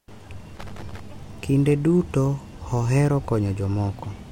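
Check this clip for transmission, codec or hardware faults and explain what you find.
One hardware fault is present. Loose connector crackle runs from 0.57 to 0.99 s. A worn or dirty contact in the signal path keeps losing and regaining connection, chopping the speech. It is heard as an irregular burst of scratchy crackle over the voice.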